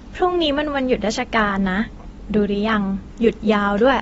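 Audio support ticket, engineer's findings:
Speech dull and smeared throughout, nothing above 7.6 kHz, fizzy sibilants. Likely AAC compression: AAC-LC at a low bitrate, roughly 24 kbps, dropping the top band and starving quantisation.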